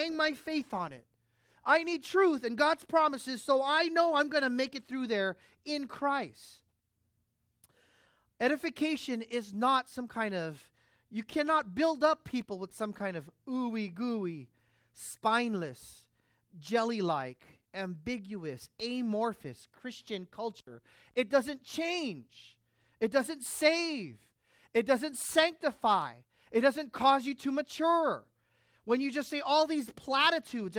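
Nothing in this speech recording stood out as a technical fault on listening.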